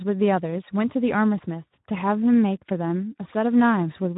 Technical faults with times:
0.00-4.17 Speex codec

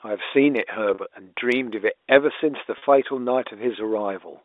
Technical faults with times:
0.94-0.98 packet loss with pitch repetition
2.78-2.82 packet loss with pitch repetition

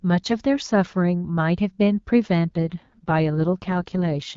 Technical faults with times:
2.47-4.37 AMR rate drop

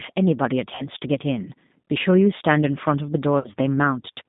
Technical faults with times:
0.00-4.29 G.729 codec
0.75-0.88 VoIP packet loss concealed by the speech codec
3.39-3.51 VoIP packet loss concealed by the speech codec

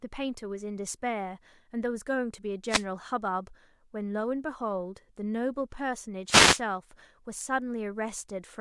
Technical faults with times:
2.68-2.84 wireless microphone noise hit
6.26-6.61 wireless microphone noise hit

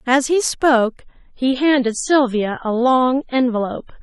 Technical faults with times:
1.01-4.03 adaptive stream at a lower bitrate

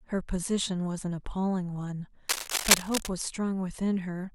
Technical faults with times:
2.28-3.10 cable scratch noise

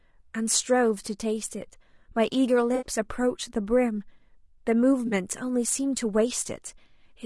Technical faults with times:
0.00-7.25 low-delay AAC compression
2.75-2.86 AAC frame loss with concealment
5.07-5.13 AAC frame loss with concealment

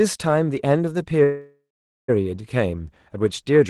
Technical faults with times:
1.23-2.10 call audio freeze

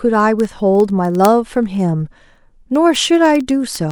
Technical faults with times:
0.10-3.92 word clock ticks

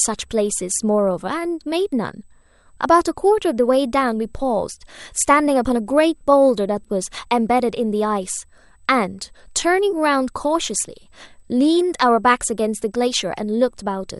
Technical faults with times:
0.00-14.20 USB whine

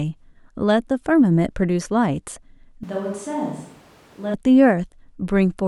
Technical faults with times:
2.83-4.34 switch to a distant microphone

